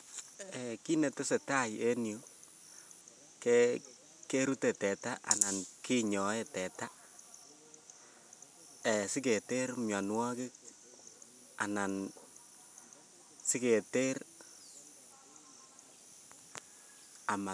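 No technical faults can be heard anywhere in the speech recording, with the signal holding steady and intact throughout.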